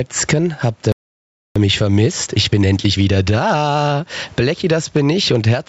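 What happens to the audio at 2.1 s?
At 2.1 s the speech is in a stretch of time-compressed catch-up from 1.56 to 4.10 s. After a stall, the player drains its backlog by cutting and cross-fading short pieces, so the speech runs about 1.25 times faster at normal pitch. Gain pumping runs through this moment too, with the gain swinging by around 15 dB, likely from gain set far too high and a fast limiter clamping it.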